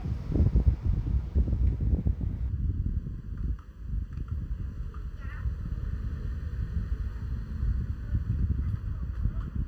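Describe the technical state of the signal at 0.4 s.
At 0.4 s the signal is intact, with no audible technical fault at that point in the sound.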